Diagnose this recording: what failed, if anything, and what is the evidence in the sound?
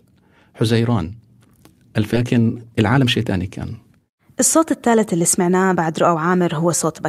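At 2.13 s the audio jumps straight forward in a skip ahead, with no silence and no concealment filling the join, so the sound on either side butts together almost directly. About a second and a half of material is gone. This is a network and jitter-buffer fault: queued audio was discarded while later packets were already waiting. A plain dropout would leave an audible gap or a faded repair; here nothing stands in for the missing stretch.

From 2.23 s to 6.16 s the sound runs about 8% fast while its pitch stays put. This is jitter buffer speed-up at the receiver. The buffer held more audio than its target, so it repeatedly cut pitch-period-sized pieces, trimming roughly a third of a second in total and leaving a hurried delivery. A clock or sample-rate mismatch would speed the sound up too, but it would raise the pitch along with it.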